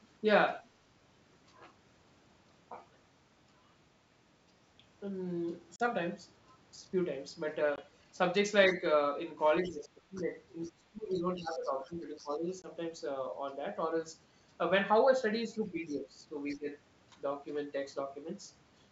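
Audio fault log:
5.76–5.81 s, 7.76–7.79 s, 12.62–12.68 s: packet loss on an ADPCM call. Hard-edged holes of 40, 20 and 20 ms, the first fitting about two lost packets and the others one each. The speech comes back slightly distorted and settles within tens of milliseconds, because the decoder's adaptive predictor and step size have lost track of the sender's. That abrupt silence and brief recovery separate it from the dips below.
9.64–10.3 s, 10.75–12.46 s, 15.45–16.68 s: speech suppressed in double talk. The talker's level sinks by up to about 15 dB in patches totalling roughly half a second, one and a half seconds and under a second. The likely cause is the echo canceller turning everything down when it can't separate the talker from loudspeaker echo.
10.15–10.21 s, 10.63–10.72 s, 11.14–12.36 s, 16.51–16.56 s: other side's voice leaking through. A second voice sits roughly 25 to 30 dB beneath the talker, in short scraps plus one stretch of over a second. 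It likely comes from loudspeaker echo that the canceller failed to remove. It overlaps the suppressed passages, and what sets it apart is an added voice, not a dip in the talker's level.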